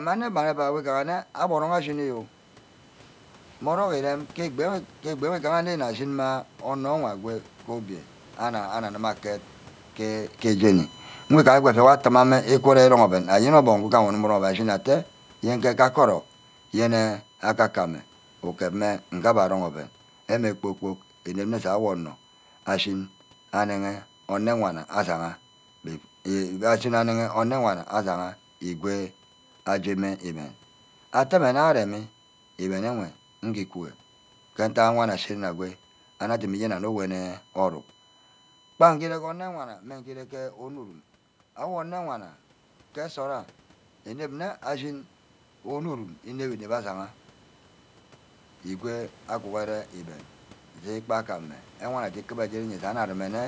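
USB whine runs through this whole speech recording, a steady 1 kHz tone strongest at its 3 kHz harmonic, roughly 35 dB below the voice, from USB frame activity leaking through power or ground. Automatic gain falling runs from 10.62 s to 27.67 s: judging the input too loud or its background noise too strong, the gain control eases the level down by about 12 dB, so the speech and its background sink together.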